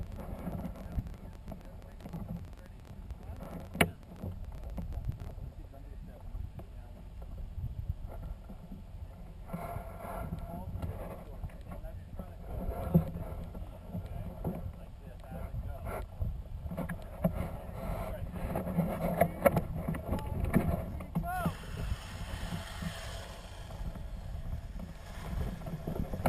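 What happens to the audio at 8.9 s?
Nothing goes wrong at 8.9 s; the audio plays through that moment intact, with no dropout, click, glitch or other fault.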